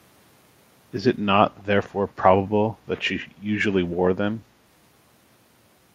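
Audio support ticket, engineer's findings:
Echo leak, 1.58–1.64 s. Brief, very faint delayed copy of the speech, roughly 35 dB below the direct signal and trailing it by 229 ms. Likely cause: far-end loudspeaker pickup that the echo canceller failed to fully subtract, so residual returned down the line. Short scrap only, not sustained.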